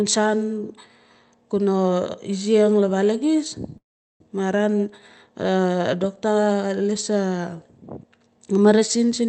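Packets on the call link were likely held up in transit, letting the jitter buffer run dry at 3.77 s and causing a call audio freeze that lasts until 4.24 s. The receiver stretches the last bit of speech into a brief fading buzz, then nearly 0.4 s of silence. When the packets arrive, the speech resumes where it stopped, with nothing lost but about 0.43 s of added delay. The Opus coding, with its top near 8 kHz, is consistent with a 32 kbps call stream.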